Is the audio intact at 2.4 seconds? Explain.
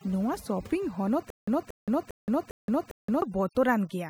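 No. From 1.30 to 3.22 s the sound is caught in a stutter with silent gaps. The same 0.23 s burst plays five times, each followed by about 0.17 s of dead digital silence, a repeat every 0.40 s. This likely comes from a stalled stream replaying its last fragment on each retry. The waveform shows identical blocks separated by flat silent stretches, and the audio in between is lost.

The whole clip, 2.4 s included, also suffers overdone noise removal. Bands near the estimated noise floor are pushed far down, thinning quieter parts of the speech. The background becomes near-silence broken by twinkling specks. On a spectrogram this looks like scattered isolated dots in the background and holes torn through the speech harmonics.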